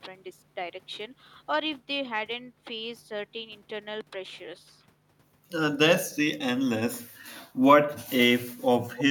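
From 8.96 to 9.04 s, an echo leak: a faint copy of the speech returns about 262 ms late, unlike reverb's smeared tail, likely from a loudspeaker echo canceller missing it.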